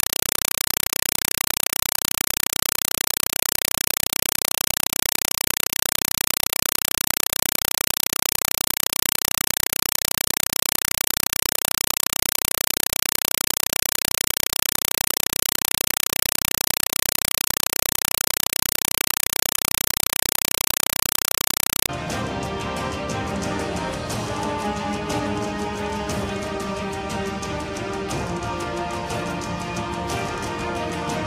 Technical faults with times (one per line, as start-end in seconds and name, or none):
0.00-21.89 compressed stream played as audio